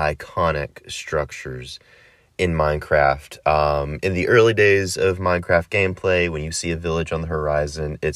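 No technical faults can be heard anywhere in the speech; the signal stays continuous and stable throughout.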